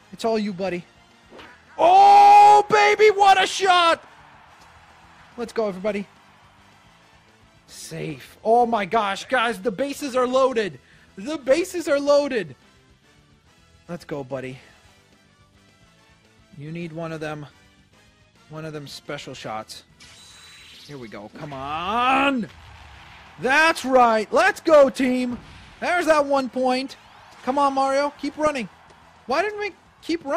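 DAB burbling occurs at 19.17 to 19.24 s and again at 28.44 to 28.51 s, each lasting under a tenth of a second. Weak reception let bit errors slip past the error correction into the MP2 data, so corrupted samples put short blips of noise into single sub-bands and corrupted scale factors threw sub-bands up or down in level for up to a frame. The result is a brief burbling laid over the sound, and in the second burst the error rate was roughly twice as high.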